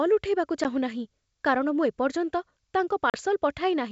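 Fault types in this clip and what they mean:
Packet loss on an ADPCM call: hard-edged silent holes of 10 and 40 ms, after which speech returns slightly distorted until the decoder's predictor resynchronises, unlike a clean dropout.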